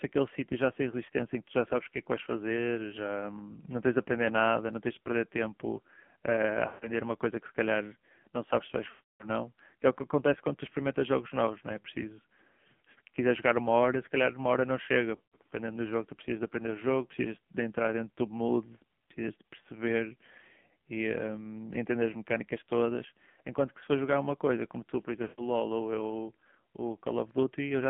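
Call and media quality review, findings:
AMR narrowband mobile codec, whole clip: buzzy, synthetic speech with nothing above 3.4 kHz and thin lows below 150 Hz. Heavy damage fits a low rate near 5.9 kbps. Telephone band plus buzz separates it from plain filtering.

Lost AMR speech frames at 6.68–6.91 s, 8.90–9.30 s, 15.16–15.36 s (scattered) and 25.22–25.48 s: drawn-out, fading sound, then a rough restart. That decay points to decoder concealment, not hard dropouts.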